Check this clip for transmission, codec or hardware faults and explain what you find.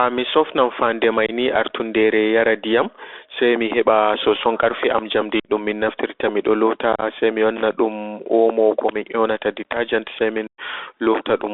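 The speech has three faults: constant codec damage, four short dropouts, and one burst of crackle.

Throughout, the sound is boxed into roughly 300 Hz to 3.6 kHz, with scratchy s sounds and a granular hiss. These are the marks of the Bluetooth CVSD headset codec, a one-bit delta coder that fits a 64 kbps link.

At 1.26–1.31 s, 5.40–5.50 s, 6.93–7.03 s and 10.47–10.60 s, the speech drops into abrupt holes. This is unconcealed Bluetooth headset packet loss, where silence replaces the lost packets. The gaps total about 22 ms, 52 ms, 52 ms and 112 ms. The one near 7 s is broken into chopped fragments spread over about 90 ms.

At 7.56–7.66 s, a brief irregular scratching burst comes from loose connector crackle, a contact rapidly making and breaking as it moves.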